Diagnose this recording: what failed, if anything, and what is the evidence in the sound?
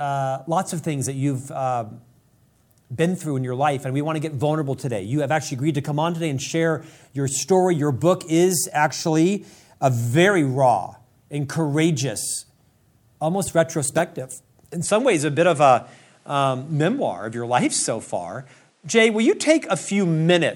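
At 14.84 s the speech turns duller and stays that way to the end. Nothing comes through above 11.4 kHz, a faint new noise floor appears, and there's no gap or level jump. That's likely an input switched to a poorer device, with a narrower-band mic taking over at the driver stage.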